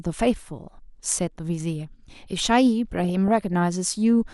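Throughout the speech, the sound is likely suffering MP2 compression at a low bitrate, about what 80 kbps would give. Starved of bits, the encoder shuts off upper sub-bands and coarsely quantises the rest, so the audio is dull, with plainly audible gurgling, granular distortion.

From 2.92 to 3.53 s, DAB burbling appears. Bit errors, a small fraction of a percent, slipped past error correction into the audio data across what sounds like a couple of dozen frames. Corrupted samples put short blips of noise into single sub-bands.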